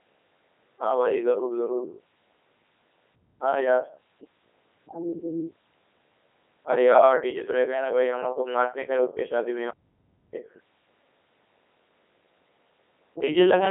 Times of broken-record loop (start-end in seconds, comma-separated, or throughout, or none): none